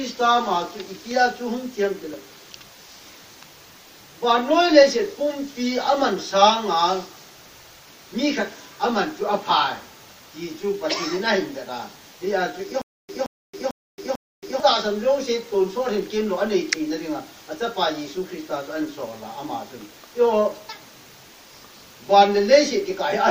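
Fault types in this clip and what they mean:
stutter with silent gaps: From 12.82 to 14.6 s, one 173 ms burst plays four times, each followed by 273 ms of digital silence. The likely cause is a stalled player replaying its last fragment. The intended audio is lost.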